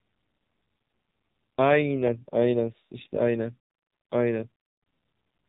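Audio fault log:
throughout AMR narrowband mobile codec. Nothing above 4 kHz survives. Few pulses drive the vocal-tract model, so speech turns buzzy and synthetic, which fits a low mode near 5.9 kbps.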